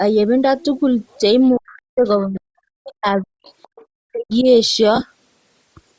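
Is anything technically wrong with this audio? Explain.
Yes, there are several problems in this speech clip, mostly around the middle where both ends of the call overlap.

Bluetooth LC3 compression runs through the whole clip and is plainly audible. The voice has a breathy, grainy edge from the encoder zeroing parts of the upper band and noise-filling it. That fits the likely cause, LC3 at around 32 kbps with 7.5 ms frames, on top of a band that already stops at 8 kHz.

The other side's voice leaks through in faint scraps at 1.42, 2.25, 3.21, 3.47 to 3.85 and 4.31 s, roughly 30 to 35 dB under the talker. Most likely the far end plays on a loudspeaker and the echo canceller leaves a residue in the mic.

The speech is suppressed in double talk from 1.56 to 3.48 s and again from 4.08 to 4.47 s. It dips hard, by something like 40 dB at worst, and comes and goes in chunks adding up to about a second and a half in the first stretch. 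This is likely the echo canceller ducking everything while both sides talk.

Lost LE Audio frames show up at 1.68 to 1.76 s as a 67.5 ms gap. That fits nine 7.5 ms frames in a row, concealed by repeating the last spectrum with random signs, so you hear a noisy smear that fades. At 4.96 to 5.02 s there are shorter scattered dropouts, the longest around 20 ms.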